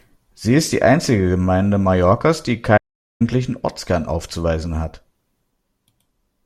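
At 2.77 s the speech drops to silence until 3.22 s, a playback stall, likely from the player running out of data or being blocked.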